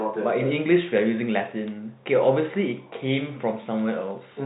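No technical faults are audible.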